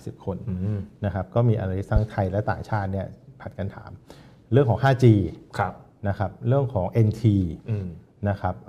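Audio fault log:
1.96 to 2.00 s, loud pop: a single sharp pop standing well clear of the sound, which carries on underneath, likely a voltage spike from a plug, switch or static.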